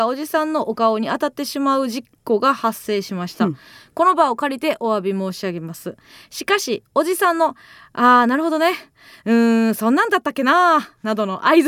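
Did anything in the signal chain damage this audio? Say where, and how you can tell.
No, nothing in the chain damaged this audio.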